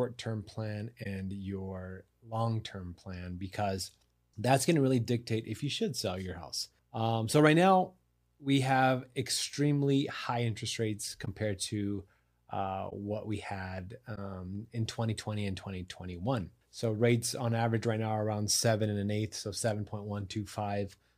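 Speech, with four brief corrupt frames concealed by the decoder. Each spans about 30 to 40 ms. They fall at 1.03–1.06 s, after "term plan"; at 11.24–11.28 s, after "extremely high interest rates"; at 12.89–12.93 s; and at 14.15–14.18 s, after "we had". Damaged bits in the compressed stream were detected. The decoder then muted or patched over the gap. Each length fits a single lost frame.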